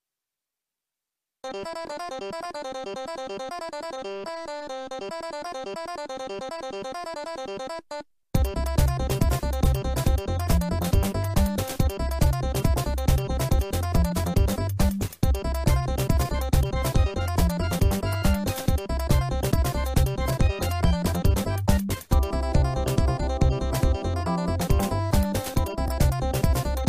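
At 1.86 to 1.88 s and again at 25.87 to 25.89 s there are repeated frames: a 23.2 ms chunk of compressed audio plays twice, which fits a single repeated frame. Each gives a tiny stutter and stretches the sound by 23.2 ms.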